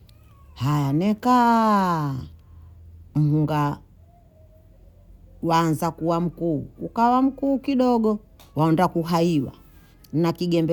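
No technical faults can be heard anywhere in this recording of speech. Nothing in the audio points to a problem at any moment.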